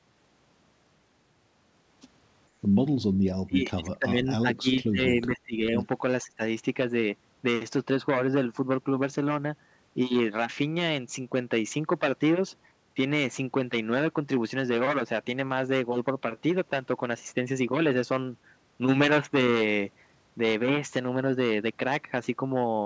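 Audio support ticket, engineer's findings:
Speech suppressed in double talk, 3.46–5.76 s and again 6.23–6.41 s: talker dips hard, about 25 dB at worst, chopping out for roughly a second and a half in the first stretch. Likely the echo canceller ducking both sides while the far end talks over. Band tops out at 8 kHz, fits G.722.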